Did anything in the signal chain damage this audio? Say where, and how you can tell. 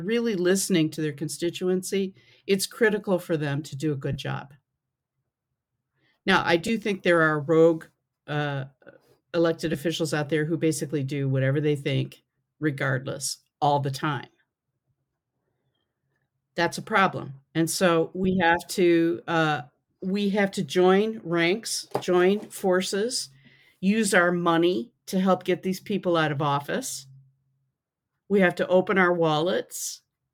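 Yes. The Bluetooth LE Audio link dropped frames, and the LC3 decoder concealed them by repeating the last spectrum with random signs. Short noisy smears appear at 4.13–4.17 s after "them to do a", at 6.67–6.69 s before "think there are rogue", at 9.72–9.75 s before "out there who basically", and at 18.24 s. Their lengths fit whole 7.5 ms frames.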